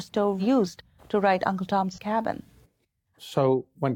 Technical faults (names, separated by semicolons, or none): AAC frame loss with concealment